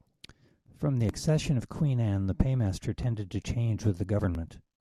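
Nothing in this bit of speech gives you anything to flag; it just runs along with no technical trouble to point to.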